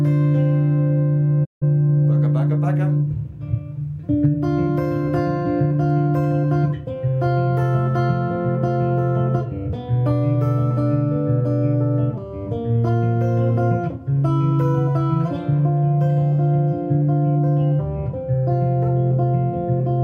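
Digital broadcast dropout at 1.44–1.64 s: the receiver lost frames and muted, fading over 20 ms; 160 ms of audio vanishes, fitting five lost frames.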